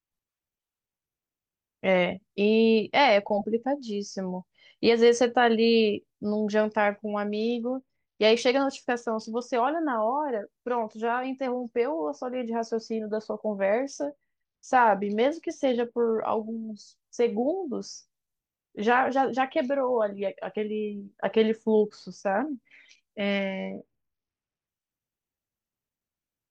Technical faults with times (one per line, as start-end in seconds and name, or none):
7.27-9.42 Bluetooth SBC bit pool drop
13.81-15.95 Bluetooth SBC bit pool drop
23.31-24.67 Bluetooth SBC bit pool drop